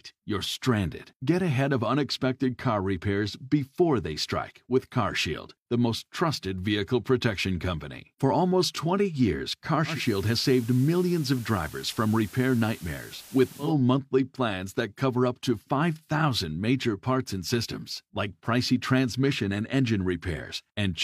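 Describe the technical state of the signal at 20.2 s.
At 20.2 s the speech signal is intact, with no dropout, clipping, glitch or other technical fault audible at that point.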